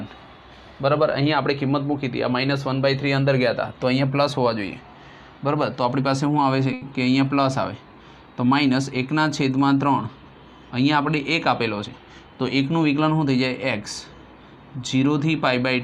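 The audio has two network-timing faults. A late packet left the jitter buffer empty at 6.73 to 6.84 s, causing a short stall: the last sound is held for about 80 ms and then resumes where it left off, with nothing lost. Later, from 11.83 to 12.28 s, a jitter buffer speed-up trims surplus delay by cutting out roughly 70 ms of pitch periods, so the sound runs about 115% fast at unchanged pitch.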